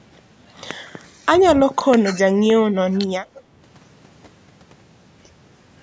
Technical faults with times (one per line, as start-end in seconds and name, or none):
1.01-1.26 speech suppressed in double talk
1.71-2.06 speech suppressed in double talk
2.73-3.44 speech suppressed in double talk